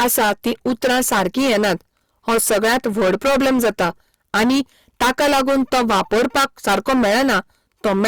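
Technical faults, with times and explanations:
Throughout, hard clipping: the speech is driven about 23 dB past what the stage can pass, so roughly a third of all samples are cut flat at the limit. Every loud syllable becomes a harsh, buzzing fuzz, because the squared-off peaks add dense high harmonics.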